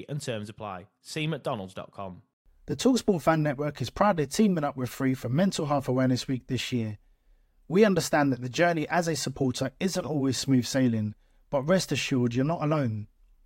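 No faults to report: nothing in the speech recording stands out as a technical defect at any point.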